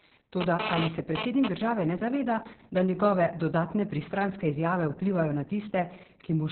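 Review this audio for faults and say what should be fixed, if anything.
Opus voice compression runs throughout: the encoder was starved, and the sound points to a bitrate near 6 kbps in SILK narrowband mode. Nothing survives above 4.2 kHz, and the coarsely coded excitation leaves the speech muffled, hoarse and faintly robotic for the whole clip. Prevent it by giving the encoder enough bitrate for wideband voice, ideally 16 kbps or more.

GSM phone buzz appears from 0.41 to 1.48 s, ending just before "države ne": a nearby 2G phone was moving data, and the audio circuit rectified its radio bursts. The result is a hard, raspy 217 Hz buzz with dense harmonics, intermittent in character, at about 2 dB below the speech. Prevent it by keeping phones well away from microphones, cables and interfaces, or switching them to airplane mode while recording.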